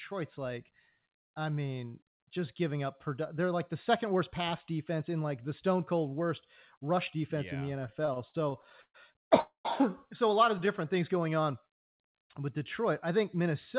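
From 7.84 to 8.96 s, just after "defense yeah in the", packets kept reaching the receiver late, so its jitter buffer ran dry over and over. This is repeated stalls, a stutter. Each time, the receiver stretched the last sound to cover the wait: 14 gaps in all, about 323 ms filled, the longest 126 ms, and 29% of that stretch concealed. Nothing is lost, but the sound hitches and drags unevenly across that second.

At 9.40 to 9.67 s, just before "so a lot of", the audio stops dead and is held. This is a call audio freeze, likely caused by packets held up in transit, which emptied the jitter buffer. About 244 ms is filled in: a trailing continuation of the last sound that fades to about 130 ms of silence. The audio then resumes where it left off, with a delay of about 244 ms added and nothing missing.

From 10.82 to 11.46 s, right after "so a lot of", the jitter buffer was building back its reserve. 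It did this by repeating single pitch periods and slivers of pause, adding 60 ms. This is a jitter buffer slow-down. That stretch plays at 92% speed with the pitch unchanged, so sounds come out slightly drawn out. Throughout, nothing sits above 4 kHz, which fits a narrowband G.711 mu-law call at 64 kbps.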